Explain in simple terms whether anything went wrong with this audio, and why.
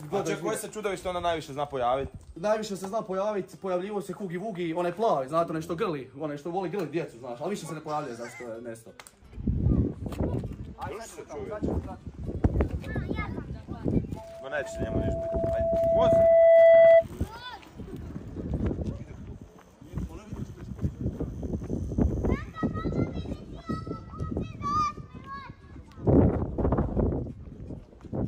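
From 14.16 to 17.05 s there is loudspeaker feedback squeal. A microphone picked up its own loudspeaker, and one pitch, near 665 Hz, kept feeding itself. Unlike a steady interfering whistle, it swells for about three seconds until it drowns out the recording.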